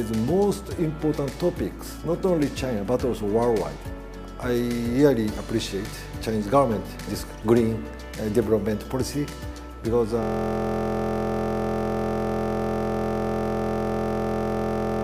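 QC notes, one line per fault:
10.23 s to end: system hang loop. From 10.23 s the same 23.22 ms fragment repeats exactly until the clip ends, giving a steady buzz at 43.1 Hz. The hardware kept cycling a stalled ring buffer, which fits a 1024-sample buffer.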